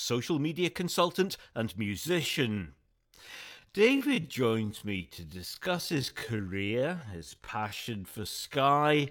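Speech with a time-stretched section from 1.99 s, just after "media consultant and", running to the end: the pace abruptly drops to about 0.59 times normal while pitch holds steady, giving a dragging pace, likely from software repeating short pieces to lengthen the audio; a plain slowdown would lower the pitch too.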